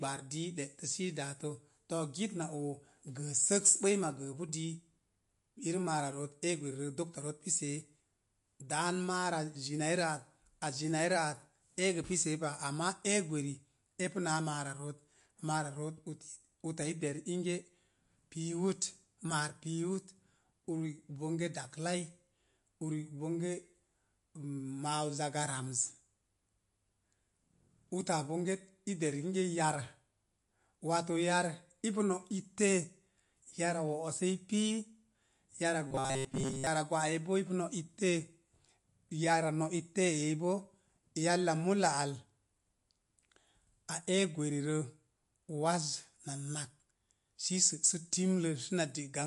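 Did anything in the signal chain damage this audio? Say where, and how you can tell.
Yes. The codec stage was likely MP3 compression at a low bitrate, near 48 kbps. Watery, swirling artefacts are plainly audible throughout the speech.

From 35.87 to 36.67 s, there is robotic sound from repeated short buffers, likely a driver or buffer underrun. A rigid 133 Hz buzz suggests roughly 7.5 ms chunks replacing most of the real audio.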